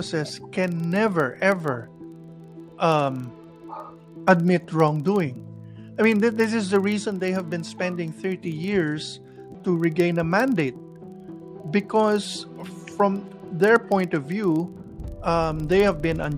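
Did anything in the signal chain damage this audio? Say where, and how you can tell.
Yes, a filter restarted on every block in the buffer processing stage: a 25 Hz buzz runs through the whole clip, tracking level, as each 40 ms block starts from silence.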